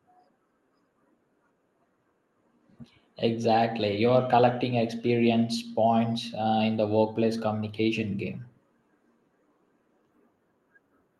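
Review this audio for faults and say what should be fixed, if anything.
Nothing to fix: the speech carries the normal coding character of a call path, with the top end stopping near 12 kHz in a way that fits Opus at a modest bitrate, and no faults turn up anywhere in the recording.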